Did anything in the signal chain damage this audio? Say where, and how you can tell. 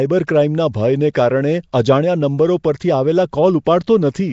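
Yes. Throughout, there's a rough, hissy halo and a smeared, underwater quality, with nothing above about 7.7 kHz. That points to the codec stage, likely Nellymoser compression at a rate that sounds like 32 kbps. Fixed-bit block coding starves weak bands and fills them with noise.

There's pre-echo at 1.72 s, also from the codec: a short hiss about 11 ms long smears in just ahead of a sharp attack. The block's quantisation noise, sized for the loud onset, spreads back into the quiet moment before it.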